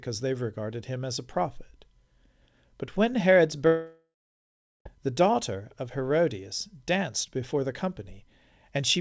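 From 3.67 to 4.86 s, likely a long network dropout: a fading buzz, then about 0.74 s of flat, empty waveform, before "the daughter of".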